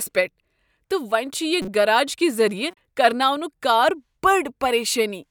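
Speech with corrupt frames decoded at two points. From 1.62 to 1.68 s an error peaks around -20 dBFS. From 2.71 to 2.77 s a fainter error sits near -40 dBFS. Damaged compressed frames were played anyway, putting energy at wrong frequencies for a few frames each.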